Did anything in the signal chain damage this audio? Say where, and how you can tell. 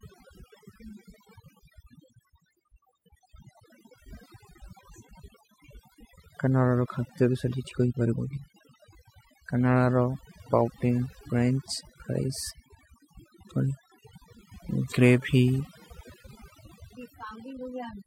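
Yes. Throughout the speech, gaps fall to near silence flecked with twinkling specks. That is overdone noise removal in processing: the suppressor pushes bands close to its noise estimate far down, taking the quieter voice components with them.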